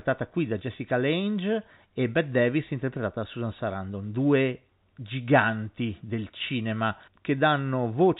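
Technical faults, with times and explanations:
No technical faults can be heard in this speech.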